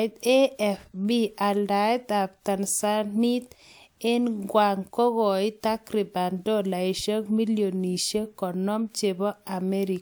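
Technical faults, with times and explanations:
No technical faults can be heard in this speech recording, and the signal carries through with no gaps, distortion or level disturbances at any point.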